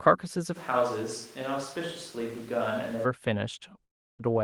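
From 0.57 to 3.03 s the speech turns roomy and hollow, loses bass, drops about 5 dB, and gains background noise, likely a switch to a distant microphone. From 3.83 to 4.22 s a fading buzz gives way to silence, and speech resumes with about 0.36 s missing, likely a long network dropout.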